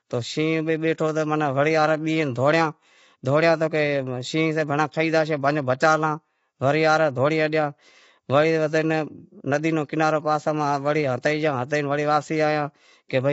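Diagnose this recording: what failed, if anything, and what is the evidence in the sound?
Throughout, the speech sounds rough and grainy, with noise filling the gaps between harmonics and nothing above 7.7 kHz. This points to the codec stage, likely low-delay AAC compression (AAC-ELD): its short frames resolve pitch poorly, and the damage fits a bitrate of about 24 kbps.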